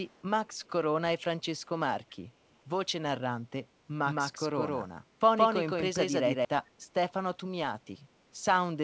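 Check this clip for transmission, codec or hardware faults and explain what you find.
Three kinds of fault are audible, all in a speech clip carried over a G.722 call path that shows nothing above 8 kHz.

An echo leak appears at 0.02–0.23 s and again at 0.65–0.70 s. It is a faint delayed copy of the speech, arriving 385 ms late, around 35 to 40 dB below the direct voice. The far end is likely playing the call on a loudspeaker, and its echo canceller let some of that pickup slip back. On a spectrogram these are ghostly, low-energy traces of the speech harmonics shifted right by 385 ms. In the waveform they are barely visible above the noise floor.

A doubled audio track runs from 4.05 s to 6.45 s. A second full-band copy of the speech sits about 150 ms behind the first at roughly the same level, so syllables sound smeared and stuttered rather than reverberant. The likely cause is the same signal being captured twice through a slower path, or an edit layering two misaligned copies. 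A spectrogram shows every harmonic pattern repeated at a fixed horizontal offset, with no decay or room colouring. The copy switches on and off abruptly at the segment edges.

Background gated by the echo canceller occurs at 5.02–5.19 s. While the loudspeaker signal was active, the canceller clamped the microphone gain, pulling the room sound down by up to about 7 dB for roughly 150 ms before releasing it. It is heard as a brief hollow dip in the ambience. In the waveform the noise floor steps down and then recovers. On a spectrogram the broadband background band briefly darkens across all frequencies.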